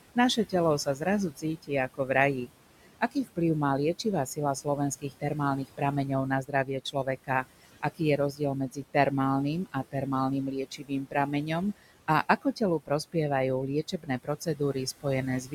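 Noise suppressor artifacts run through the whole recording. The suppressor estimates the steady room noise, which sits about 16 dB below the speech, and pulls those bands down by about 18 dB frame by frame. The result is a background that drops away in the gaps and swells back under each phrase.

Speech cut by the noise suppressor appears in six stretches: 0.15 to 3.38 s, 4.04 to 5.81 s, 6.44 to 8.95 s, 9.65 to 9.95 s, 10.51 to 13.15 s, and 13.92 to 15.53 s. In each, the suppressor mistakes low-level parts of the speech for noise and attenuates them along with the background, by about 14 to 18 dB at the deepest points. Only brief portions within each span are hit, from about a tenth of a second up to most of a second in total, so soft consonants and trailing syllables come across swallowed or faint.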